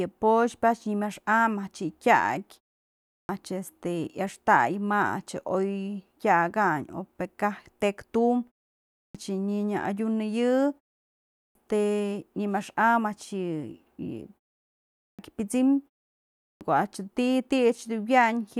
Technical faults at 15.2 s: clipped start after a pause

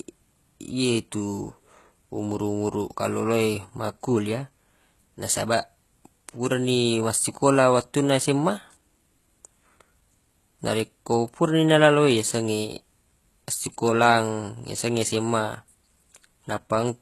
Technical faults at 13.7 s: HE-AAC compression

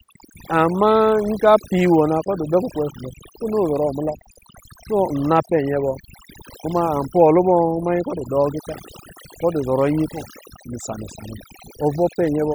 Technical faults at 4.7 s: overdone noise removal

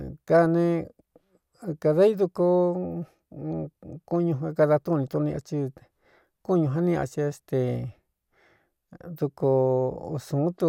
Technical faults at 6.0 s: none

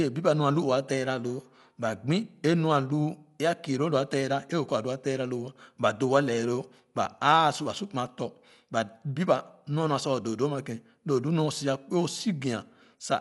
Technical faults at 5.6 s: Dolby Digital compression

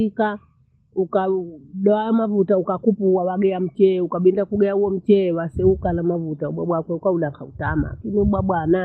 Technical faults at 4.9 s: none

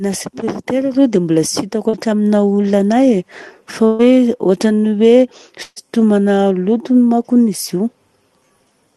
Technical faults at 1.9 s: short concealed packet loss

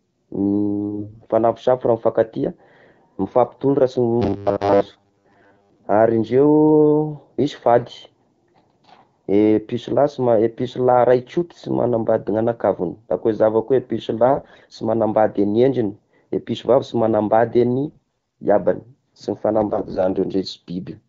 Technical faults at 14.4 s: AMR bit errors

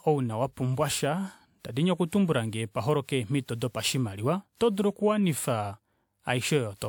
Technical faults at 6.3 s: generation loss

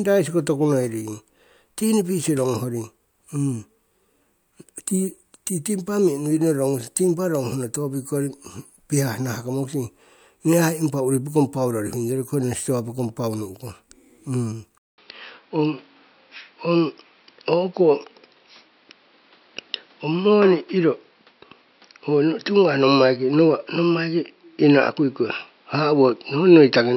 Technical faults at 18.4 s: input switched to a poorer device

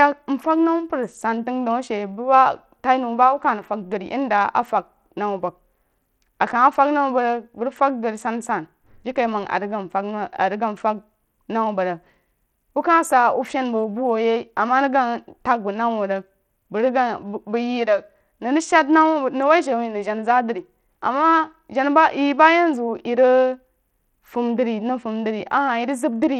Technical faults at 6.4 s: Bluetooth SBC compression

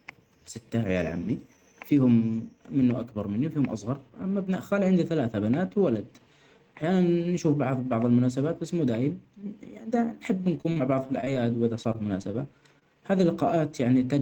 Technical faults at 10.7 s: repeated packet loss (robotic sound)

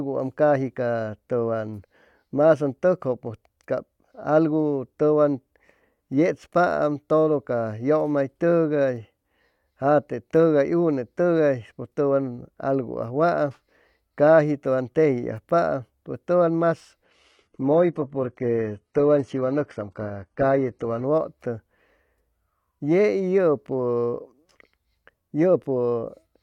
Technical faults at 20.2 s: adaptive stream at a lower bitrate

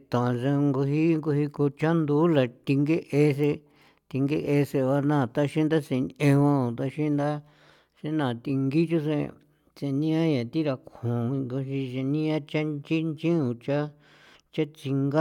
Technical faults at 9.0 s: none

